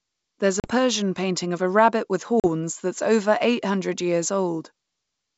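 Packet loss on an ADPCM call hits at 0.60 to 0.72 s and again at 2.40 to 2.45 s. Each time about 40 ms, roughly a couple of packets, drops to hard-edged silence. The decoder's predictor and step size then disagree with the sender's, so the wideband speech resumes slightly distorted before it settles.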